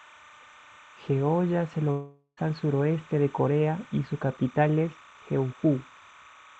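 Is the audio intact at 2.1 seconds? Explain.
No. The moment falls inside a long network dropout from 1.91 to 2.39 s. The original speech there is gone, about 460 ms of it. What plays instead is the last sound carried on as a buzz that fades away. The final 90 ms or so is silence. Then the speech resumes, with the lost part simply skipped. The likely cause is that no packets reached the receiver for that stretch, so it filled the gap itself.

There is also timecode bleed, present through the whole clip, so 2.1 s has it too. Linear timecode has leaked into the audio from a neighbouring line. It is a square wave flipping between pitches near 1 kHz and 2 kHz. Its framing fits a 29.97 frames-per-second code. It sits about 25 dB below the speech. It sounds like a steady, chirping warble running behind everything.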